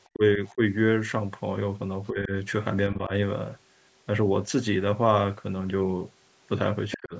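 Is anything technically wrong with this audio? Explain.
Yes. Speech suppressed in double talk occurs at 0.13 to 0.62 s, 2.1 to 2.31 s, 2.93 to 3.12 s and 6.97 to 7.15 s. The likely cause is an echo canceller that hears both ends at once, cannot tell the talker from loudspeaker echo, and pulls the whole signal down. Each dip lasts about a fifth of a second in total. The drop is about 20 dB in the first, 10 dB in the second, 5 dB in the third and 30 dB in the last, so the speech audibly sinks or nearly vanishes.

The other side's voice leaking through appears at 0.47 to 0.54 s and 6.91 to 6.98 s. This is likely loudspeaker sound that the echo canceller failed to remove from the microphone signal. The first scrap sits about 30 dB below the speech. The second, about 10 dB down, comes just before the final suppression.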